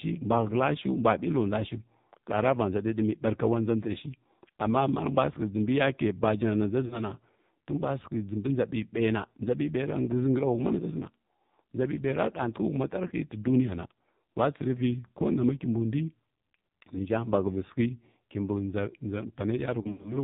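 Throughout, the speech carries the AMR narrowband mobile codec's sound. Nothing is heard above 4 kHz, and the voice is buzzy and synthetic, which fits a low AMR mode around 6 kbps. The damage is heavy, but it stays constant rather than coming and going like a network fault.

Lost AMR speech frames appear at 6.86 to 7.04 s, just after "jinbi yake bajana na", where about 40 ms goes missing. Another comes at 13.08 to 13.14 s, with 20 ms missing. The last runs from 19.82 s to the end, where 140 ms is lost across 220 ms, with the longest gap 80 ms. The single lost frame gives a brief dip or warble, and in the longer runs the decoder stretches the last sound and lets it fade rather than cutting to silence, which sets this apart from a plain dropout.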